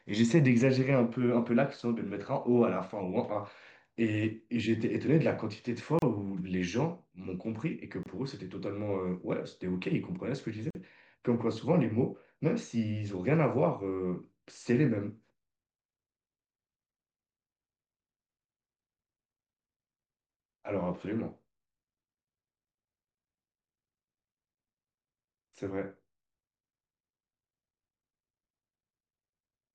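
Speech running continuously is interrupted three times by a gap at a join of encoded pieces: at 5.99 to 6.02 s (about 33 ms), 8.03 to 8.06 s (27 ms) and 10.70 to 10.75 s (45 ms). Each piece was encoded on its own and butted together with the encoder's start delay and final-frame padding left in. The sound drops out and resumes exactly where it stopped. On a waveform these show as flat-line notches. On a spectrogram they are thin vertical blank stripes with slightly blurred edges.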